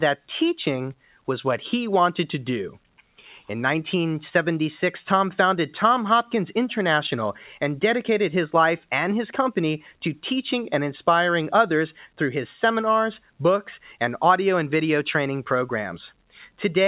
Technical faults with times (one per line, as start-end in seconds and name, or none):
0.97-1.28 sound cut by the noise suppressor